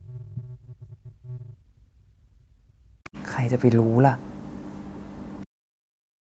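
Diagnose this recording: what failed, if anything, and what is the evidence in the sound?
Speech suppressed in double talk, in call processing, from 0.0 to 3.15 s and again from 5.45 s to the end. The sound sinks by up to about 40 dB in uneven pieces. The waveform shows collapsing envelopes, and the spectrogram shows gaps where energy fades. The echo canceller, likely seeing both sides at once, turned everything down.

The other side's voice is leaking through from 3.04 to 3.23 s, a faint second voice about 25 dB below the talker. On a spectrogram it shows as harmonic traces that don't match the main sound. The echo canceller likely left some loudspeaker pickup in the microphone signal.

A lost packet was rebuilt from error correction at the network and codec stage, around 3.83 to 3.85 s. The decoder filled the 20 ms gap with a lower-quality copy, so there is no dropout, just a brief rough, grainy patch. 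On the spectrogram it appears as a short smeared, noisier slice within the 8 kHz band the Opus path carries.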